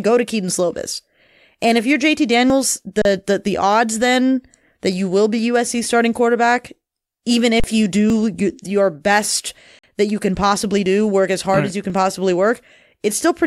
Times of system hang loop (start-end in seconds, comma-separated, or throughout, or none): none